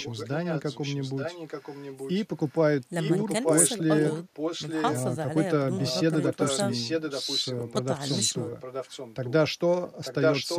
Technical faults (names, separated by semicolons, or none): echo leak; speech suppressed in double talk